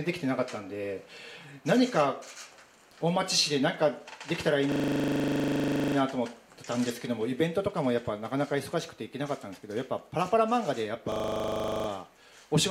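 A system hang loop occurs from 4.72 to 5.96 s and again from 11.12 to 11.88 s. A 40 ms buffer replays 31 and then 19 times while the system is frozen, producing a rapid 25 Hz stutter. Afterward, playback resumes with essentially nothing missing.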